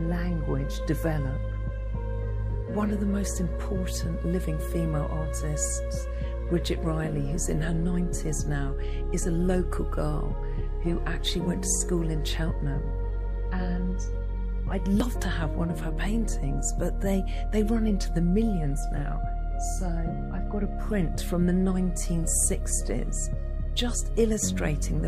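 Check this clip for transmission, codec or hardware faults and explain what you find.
One fault stands out: a burst of damaged data in a compressed stream at 15.00 s. Corrupted bytes made the decoder misread a frame and resynchronise at the next header, producing a brief glitch. The waveform shows a discontinuity there.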